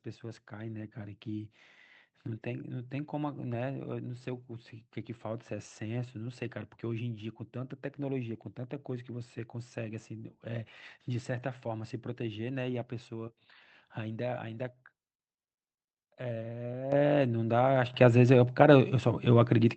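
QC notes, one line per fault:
16.92 s and 17.94 s, microphone volume stepped up: the input level jumps by about 10 dB, then by about 7 dB. The call software raised the microphone gain in two steps, so the voice and the background noise get louder together at each instant.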